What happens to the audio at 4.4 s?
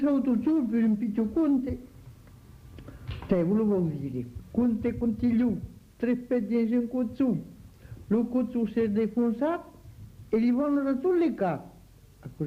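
At 4.39 s the audio lurches forward with no pause: roughly a second of sound is simply absent, and the material on either side of the cut butts together almost seamlessly. This is a skip ahead, where a stretch of audio was discarded while later audio was already queued, so playback resumed from the newer material instead of filling the gap.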